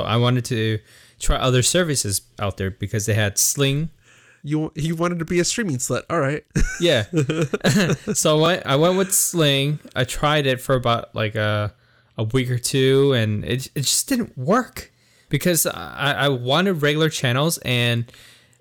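Hard clipping runs through the whole of this speech recording: the signal is driven about 6 dB beyond what the chain can pass, so the loudest peaks are sliced flat. Well under one percent of samples are affected, but each flattened top throws energy into high harmonics, heard as a gritty crackle on the strongest syllables. Repeated buffer faults occur at 5.28 to 5.30 s and at 8.46 to 8.48 s. Each time, fresh audio failed to arrive and the playback device replayed its last block, so a short slice is heard twice with an abrupt seam at the join. The repeated span is about 20 ms, which fits a 20 ms buffer, and it comes across as a brief click-like stutter rather than an audible word repetition. Because the replay is inserted rather than replacing anything, essentially no audio goes missing.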